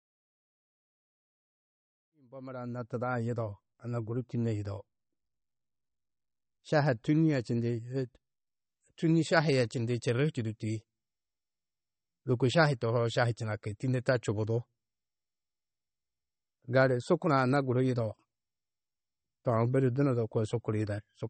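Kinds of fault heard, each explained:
MP3 compression: The speech carries plainly audible codec damage, likely from MP3 encoding at a low bitrate, and the sound fits something around 32 kbps. Short of bits, the encoder discards everything above 8.4 kHz, so the treble stops abruptly, and weak frequency lines switch on and off between frames, giving a watery, swirly texture and chirpy s sounds. This persists throughout, including during the smooth fade-in that reaches full level at 3.34 s.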